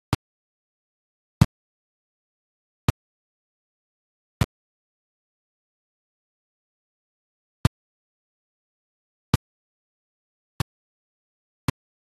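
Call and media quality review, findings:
Digital broadcast dropout from 6.05 s: receiver muting on failed frames, about 480 ms lost across 720 ms, longest gap 168 ms. Waveform and spectrogram show scattered blank holes.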